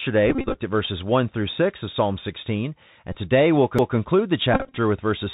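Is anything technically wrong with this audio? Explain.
Yes. The whole clip of speech passes through the Bluetooth CVSD headset codec, and there are three Bluetooth headset packet repeats and one CD skip.

The Bluetooth CVSD headset codec affects the entire recording. CVSD encodes 64 kbps as single up-or-down bits with an adapting step, so nothing above 4 kHz survives, and the damage is plainly audible. Sibilants turn scratchy, loud high-frequency bursts distort as they outrun the step size, and a granular hiss sits beneath the speech. A spectrogram would show a hard ceiling at 4 kHz with a speckled noise floor below it.

The Bluetooth headset packet repeats occur at 0.30 to 0.56 s, 3.12 to 3.15 s and 4.54 to 4.77 s. When headset packets were lost, the decoder replayed the previous packet's bits. In the first and third spans the losses total about 146 ms and 143 ms, scattered across roughly a quarter second, with the longest runs about 30 ms. 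Those runs produce a brief buzz near 267 Hz, the rate of repeated 3.75 ms packets. The middle span is a short burst of about 22 ms. On a waveform these sections look like identical short segments tiled side by side, and a spectrogram shows harmonic stripes spaced about 267 Hz apart.

The CD skip comes at 3.78 s. A knock or a disc flaw sent the laser to another turn of the spiral, so playback mutes for only a few milliseconds and then resumes from a different point. The result is a tick followed by a discontinuity in the speech. A waveform would show a tiny gap and an abrupt mismatch on either side, and a spectrogram would show a thin vertical click line.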